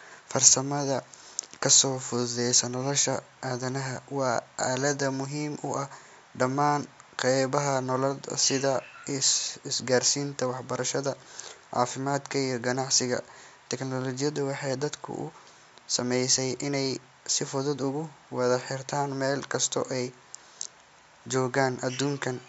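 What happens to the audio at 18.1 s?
Nothing goes wrong at 18.1 s; the speech there is intact, carrying on through the call's microphone processing with its usual bass trimming.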